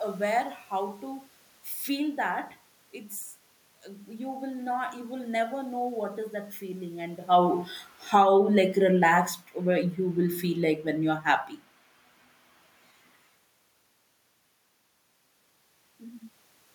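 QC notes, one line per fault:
7.19 to 11.31 s, automatic gain falling: right after "is that feeling" the AGC decides things are too hot and eases its gain down by about 7 dB over four seconds, so the speech and the room noise sink together rather than the voice alone fading.
8.24 to 8.8 s, automatic gain rising: partway through that dip the AGC briefly swings the other way and pushes gain back up by about 4 dB in roughly half a second. Voice and background swell together, a short bump inside the longer slide down.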